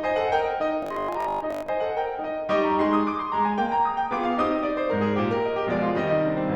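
From 0.83 to 1.69 s, new audio likely reached the playback software too seldom, so it kept replaying its last short buffer, about 20 ms long, for most of that stretch. This robotic sound from repeated short buffers imposes a rigid, metallic 50 Hz buzz on the music.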